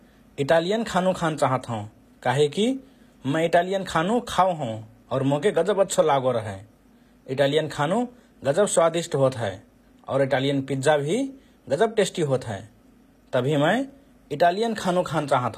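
From start to finish, the speech carries plainly audible codec damage. S sounds turn gritty and lispy. Nothing reaches above 14.9 kHz. This is likely HE-AAC compression at a low bitrate, around 24 kbps. Its treble is rebuilt from copied lower bands, so harmonics misalign.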